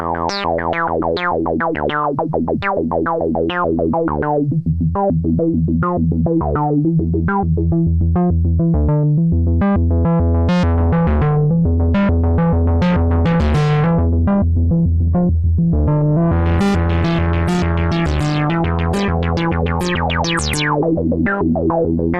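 At 10.74 s the audio abruptly drops in quality, with codec artefacts rising, and stays that way to the end with no gap. This is an adaptive stream at a lower bitrate, consistent with Opus dropping from 64 to 16 kbit/s.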